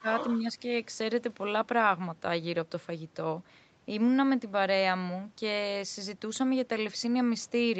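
An echo canceller likely mistook near-end speech for loudspeaker echo during double talk, causing speech suppressed in double talk at the very start of the speech clip, 0.0 to 0.08 s: the opening sound drops by roughly 20 dB for about 70 ms.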